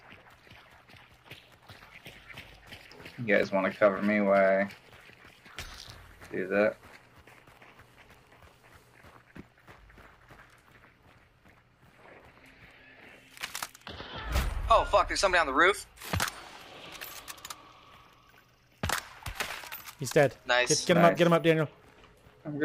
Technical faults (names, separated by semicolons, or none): audio missing between chunks